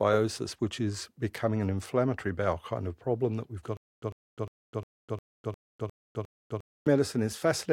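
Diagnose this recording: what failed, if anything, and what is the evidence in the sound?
Stutter with silent gaps from 3.77 to 6.87 s, just after "problem that we've got": a 100 ms speech fragment repeats eight times, each followed by 254 ms of digital silence. This is likely a stalled playback stream replaying its last buffer on each retry, so the intervening audio is lost.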